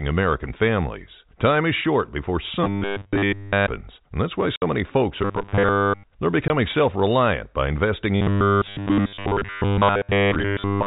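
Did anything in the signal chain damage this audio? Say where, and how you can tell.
Yes. The driver or buffer stage is the likely problem: audio seems to arrive too seldom, so the playback side keeps replaying its last short block and skips the real material. The result is robotic sound from repeated short buffers, a rigid metallic buzz at 100 Hz, which points to a 10 ms block. It runs from 2.64 to 3.67 s, where the repeats take over almost entirely, then from 5.23 to 6.04 s and from 8.16 s to the end, with most of the sound replaced.

The network stage also lost data, and the receiver filled the gaps with silence. This packet loss filled with silence cuts a 60 ms hole at 4.56 to 4.62 s, which fits three 20 ms packets, and a single 20 ms hole at 6.48 s, matching one packet. Both gaps have abrupt edges. The surrounding audio carries the narrow telephone band of the G.711 link.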